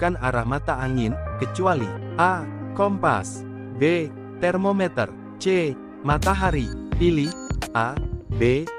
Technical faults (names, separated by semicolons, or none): none